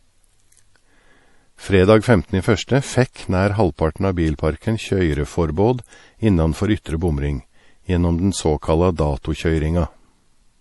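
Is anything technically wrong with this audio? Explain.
Yes. Throughout the speech, nothing is heard above 11.5 kHz. The sound is plainly watery and swirly. This is likely MP3 compression, at a bitrate that fits about 48 kbps. Short of bits, the encoder cuts the treble and lets weak frequency lines flicker between frames.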